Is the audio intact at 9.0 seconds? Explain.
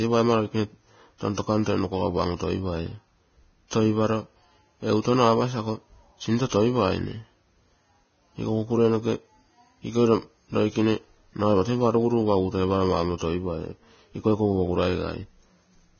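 No, at 9.0 s the speech carries the same damage as the rest of the clip: nothing above about 6.6 kHz, with hissy, grainy treble and blurred consonant attacks. That's likely Vorbis compression at a low bitrate, roughly 17 kbps, where coarse quantisation turns fine high detail into noise.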